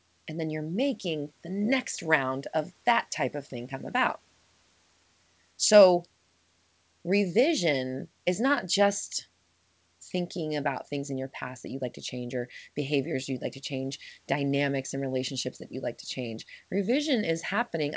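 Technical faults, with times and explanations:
No technical faults turn up here; the speech comes over the call path as you'd expect, with the room's background noise sitting about 42 dB below it.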